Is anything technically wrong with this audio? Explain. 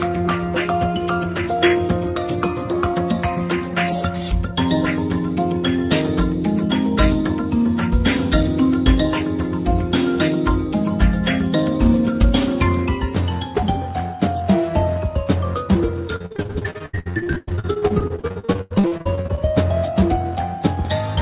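Yes. From 16.16 to 19.39 s there is repeated packet loss, giving a robotic sound. Packets kept going missing or arriving too late, about 45 times in that stretch, and each hole was patched by extending the preceding sound. The gaps run up to about 93 ms, and close to half of the span is filler rather than real audio, so the sound turns choppy and robotic with pieces missing. The call path itself passes nothing above 4 kHz, which fits a G.711 mu-law codec.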